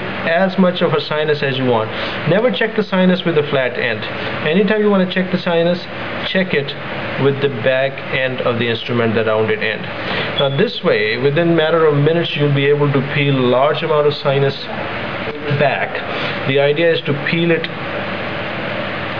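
No technical faults can be heard anywhere in the recording.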